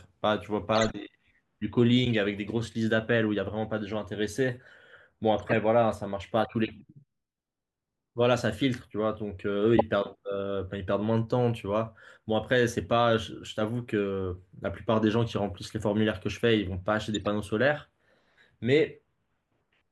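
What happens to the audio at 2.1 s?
A brief chirp-like burst of noise, peaking around -15 dBFS, cuts through the speech from 2.05 to 2.15 s. It is a corrupt frame decoded: damaged bits in the compressed stream were played anyway, pushing energy to wrong frequencies over roughly a few codec frames.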